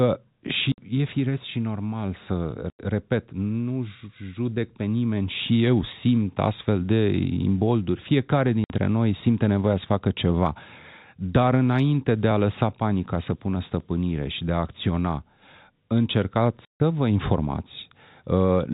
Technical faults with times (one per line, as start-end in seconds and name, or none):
0.72-0.78 packet loss filled with silence
2.70-2.79 packet loss filled with silence
8.64-8.70 packet loss filled with silence
16.65-16.80 packet loss filled with silence